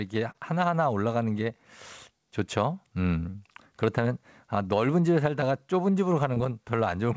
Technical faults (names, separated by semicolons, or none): short concealed packet loss